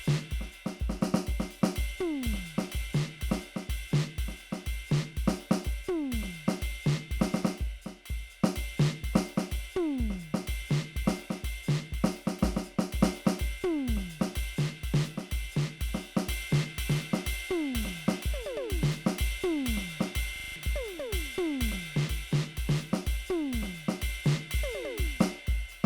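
A music clip with a system hang loop from 20.36 to 20.56 s: one 40 ms slice repeats exactly, buzzing at 25 Hz, rather than falling silent as a dropout would.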